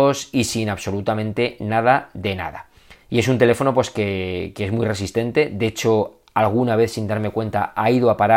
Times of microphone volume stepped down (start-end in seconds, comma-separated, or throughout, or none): none